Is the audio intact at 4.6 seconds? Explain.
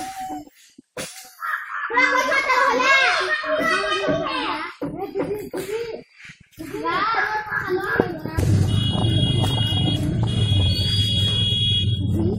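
Yes, the audio is intact at 4.6 seconds, with no dropout, click, distortion or other fault audible there.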